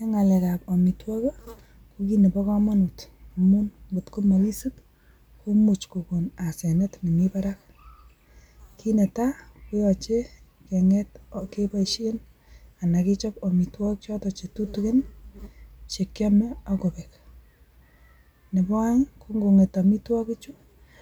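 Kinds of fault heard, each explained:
No technical faults can be heard in the speech recording: the signal stays continuous and stable throughout, with no dropouts, distortion or level disturbances.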